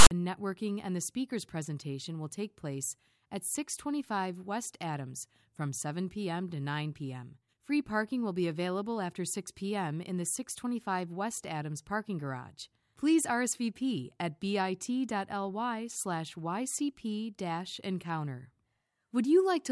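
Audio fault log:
0.00–0.11 s, file tags played as audio: the decoder treated the metadata block at the head of the file as sample data instead of skipping it. The text portion, read as raw numbers, comes out as a loud rasp offset to one side of zero, while the zero padding that follows the text turns into silence. The result is a burst of static with hard edges at the very start, before the speech begins.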